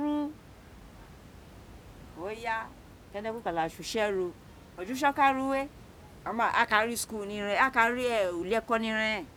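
Nothing in this speech recording points to a problem in the audio chain, and the only thing underneath the talking is a bit of room noise sitting about 22 dB below it, which is simply part of where the microphone was.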